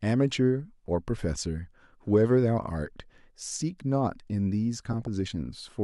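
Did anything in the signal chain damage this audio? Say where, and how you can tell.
Yes. From 4.86 to 5.07 s the speech breaks into short blips of noise in single sub-bands, which is DAB burbling at the codec stage. Weak reception let bit errors slip past error correction into the MP2 data. The damage covers roughly nine frames.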